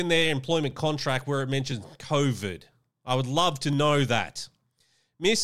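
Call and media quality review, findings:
Overlapping chunks: brief click/stutter at 0.71 s (before "contract where it"), 1.72 s (after "contract where it"), 2.72 s (before "I would love to"), 3.73 s and 4.74 s. Chunking/streaming stage; 1.0 s chunks overlap, replaying 6.5 ms at each join.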